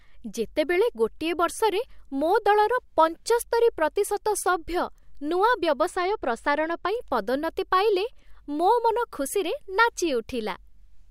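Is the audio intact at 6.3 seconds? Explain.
No, 6.3 seconds falls inside a channel delay (comb filtering) stretch from 5.88 to 6.88 s. One channel runs a couple of samples late, and summing to mono cancels shared content at evenly spaced frequencies, starting around 10 kHz, so the speech turns dull at the top.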